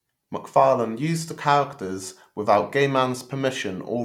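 Nothing stood out on listening to this recording.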